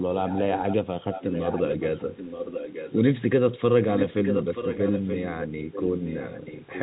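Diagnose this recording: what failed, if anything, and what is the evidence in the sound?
Echo leak, call processing, at 0.26–0.76, 1.11–1.77, 1.98–2.97, 3.93–5.45, 5.72–5.84 and 6.05 s to the end. A copy of the speech returns 928 ms late, roughly 10 dB down and louder near 3.93–5.45 s. The likely cause is the far end's echo canceller failing to remove its loudspeaker pickup.

Packet loss with pitch repetition, network, at 0.45 s. A 10 ms gap is bridged by repeating the last pitch period, heard as a brief held, buzzy sound.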